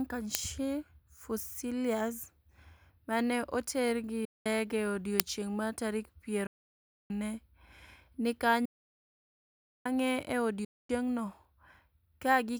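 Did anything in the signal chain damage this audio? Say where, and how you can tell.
Yes. Two stages went wrong. The first is the driver or buffer stage, where an uninitialised buffer was sent to the output before any audio had been written into it, so stale memory was played as samples. You can hear this as a very short, loud crack at 0.35 s, lasting about 1.45 ms, which fits a 64-sample block. It happens again at 5.2 s, lasting about 2.9 ms, which points to a 128-sample block.

The second is at the playback link, which is likely a Bluetooth dropout, where packets missed their deadline at the headphones and were discarded. The speech cuts to silence from 4.25 to 4.46 s, from 6.47 to 7.11 s, from 8.65 to 9.86 s and from 10.65 to 10.90 s, losing about 203 ms, 630 ms, 1.2 s and 244 ms. Each time, the speech comes back further along rather than where it stopped, as though it kept running unheard during the gap.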